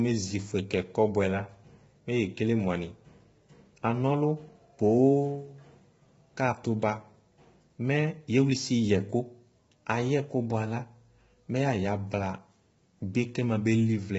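Speech, passed throughout through heavy low-delay AAC compression, likely AAC-ELD at a rate consistent with about 16 kbps. The voice turns rough and grainy, with noise filling the gaps between harmonics and nothing above 7.7 kHz.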